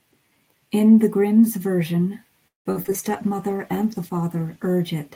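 A speech recording that breaks up twice in its second half. From 2.47 to 3.09 s there is repeated packet loss (robotic sound): five separate dropouts, the longest 180 ms, leave roughly half of that stretch as concealment rather than real audio. The decoder bridges most holes by stretching the last sound, which makes the sound choppy, but some of the missing audio is simply silence. On a waveform this shows as an uneven, stuttering envelope with flat gaps. On a spectrogram, smeared, repeated harmonic bands alternate with blank slices. Right after, from 3.11 to 4.79 s, a call bitrate drop makes the speech coarse, watery and dull for about 1.6 s. The sound suggests the encoder fell from around 64 kbps to about 16 kbps. On a spectrogram the upper band is sharply cut away above a hard ceiling, and the remaining energy looks blotchy and quantised until full bandwidth returns.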